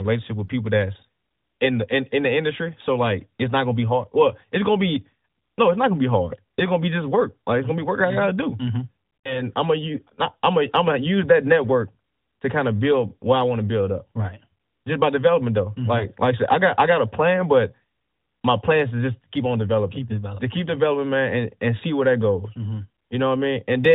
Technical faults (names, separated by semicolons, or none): lost AMR speech frames